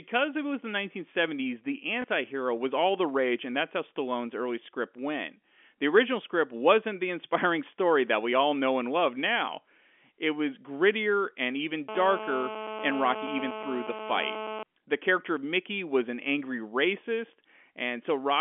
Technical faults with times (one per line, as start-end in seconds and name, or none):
2.02-2.04 packet loss with last packet repeated
11.89-14.63 GSM phone buzz